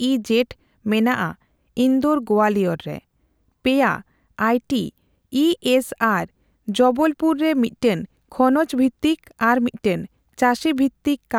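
Nothing in the recording stands out as a technical fault; the speech runs along without any glitch, dropout or distortion catching the ear.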